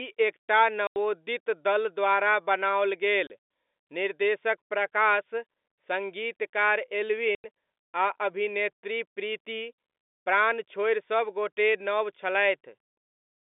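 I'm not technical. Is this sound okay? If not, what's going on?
No. Small chunks of the audio got lost in transit, a problem called packet loss filled with silence: the receiving end played nothing where they should have been. You hear three brief dropouts with hard edges. One runs from 0.87 to 0.96 s, right after "एक टा". One is from 3.27 to 3.30 s, after "दल द्वारा बनाओल". The last is from 7.35 to 7.44 s. The gaps last 90, 30 and 90 milliseconds, which suggests chunks about 30 milliseconds long. The narrow telephone sound comes from ordinary G.711 telephone coding.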